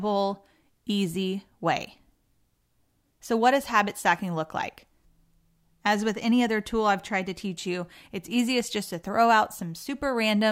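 Listening through the speech recording, nothing stood out as a technical problem at any point.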